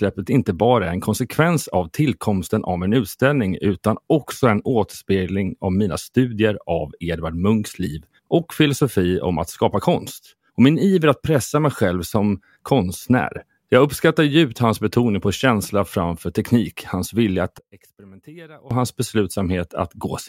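One channel inverted, from 17.59 to 18.71 s: for just over a second the speech drops by about 24 dB to a faint residue. The likely cause is reversed polarity on one stereo channel, so the centred content cancels when the channels are summed to mono.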